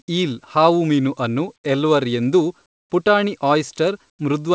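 Comfort noise replaces the background at 2.66–2.90 s, just after "ಹಾವುಮೀನು ಅನ್ನು ಎಲ್ವರ್ ಎಂದೂ", and again at 4.10–4.19 s. In each pause the real background gives way to flat, featureless hiss, about 22 dB and about 17 dB quieter, likely because the sender stopped transmitting and the receiver synthesised filler noise.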